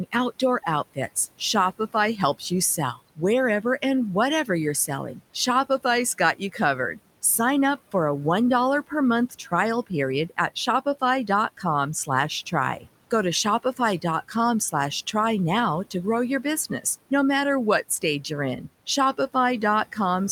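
From 6.18 to 6.55 s, the speech is cut by the noise suppressor. It mistook part of the speech for background noise and pulled it down, by up to about 13 dB. Around a tenth of a second in total sounds swallowed and faint. The room noise sits about 21 dB below the speech.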